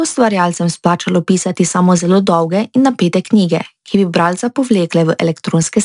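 The whole speech clip carries 4-bit ADPCM compression, and the damage is plainly audible: each sample is coded as a coarse 4-bit step, so a gritty hiss rides every loud syllable and sharp onsets crunch. Nothing reaches above about 10.6 kHz, which fits a bitrate near 89 kbps.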